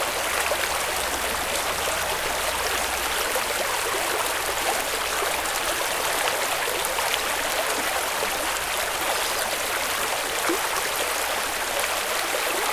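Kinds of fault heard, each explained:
Nothing wrong turns up here; the sounds come across just as they should, with no glitches or damage to point to.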